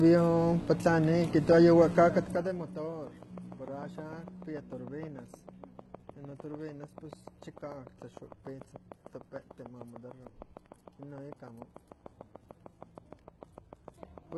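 The whole speech clip is heavily mangled by what is likely HE-AAC compression, at a low bitrate that fits something around 16 kbps. Only the lower spectrum is really coded, and the treble is rebuilt by copying lower bands upward under a coarse envelope. So the top end sounds bright but wrong. Its harmonics don't line up with the real ones, and sibilants come out gritty, metallic and a bit lispy.

From 1.97 to 2.76 s there's zipper noise. The level drops by about 15 dB over that stretch, but it's applied in a couple of hundred tiny unsmoothed steps a second instead of a clean ramp. Each step leaves a little click, so you hear a fine zipping texture riding on the speech while the level falls.

Then from 2.92 s right through to 14.33 s there's a train of clicks, around seventy of them at a steady 6.66 per second. They're all much the same shape and peak at roughly 15 dB above the speech, so they tick away clearly, pauses included. 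A regular, same-shaped pulse like that is most likely interference from nearby gear or a faulty connection or power supply.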